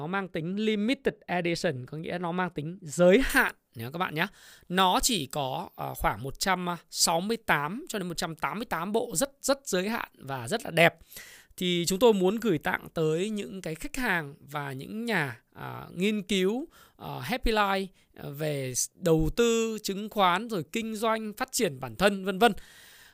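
From 3.30 s, just after "nó mang tính giới", through to the end, there's pre-emphasis left on: the 75 µs FM treble lift was never undone, so 10 kHz sits about 13 dB hot relative to 1 kHz. The speech turns thin, bright and hissy on sibilants.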